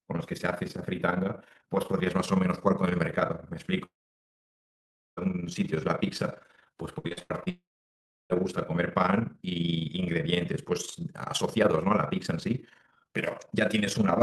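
Throughout the speech, frames were windowed and overlap-added with a gain that does not sum evenly, producing overlap-add ripple. The level swings by about 11 dB around 20 times a second, heard as a rough flutter laid over everything.

From 3.85 to 5.19 s the audio stops: a brief fading continuation of the last sound gives way to about 1.27 s of silence before the speech resumes with that stretch missing. This is likely a long network dropout.

Between 6.99 and 7.48 s, repeated packet loss (robotic sound) sets in. Six separate holes, the longest 78 ms, are each patched by extending the preceding sound, so nearly half of that span is concealment. The result is choppy speech with pieces missing.

Straight after, from 7.50 to 8.32 s, what is likely a second long network dropout follows the same pattern. A short fading tail leads into about 0.67 s of silence, and the speech picks up again later without the lost portion.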